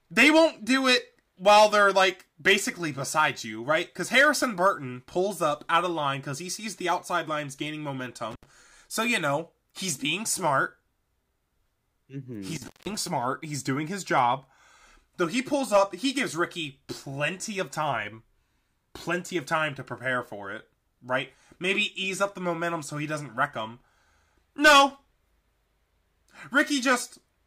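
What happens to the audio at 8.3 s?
Right after "the outside lines gaining", an intermittent contact breaks the speech from 8.31 to 8.44 s. A loose plug or cable connection opens for about 75 ms, dropping the signal to faint hiss, with crackle at each edge as the contact breaks and remakes.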